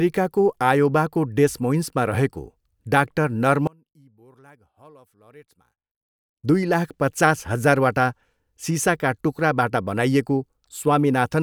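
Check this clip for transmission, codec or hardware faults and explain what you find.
One fault is present, between 3.67 s and 6.44 s: the speech collapses to a faint residue, about 31 dB down. This is most likely one channel inverted. With one stereo channel's polarity reversed, the centred speech common to both sides cancels when they are summed to mono, leaving only their small difference. Unlike a dropout or mute, the level is not zero: a faint ghost of the speech persists until normal level returns at 6.44 s.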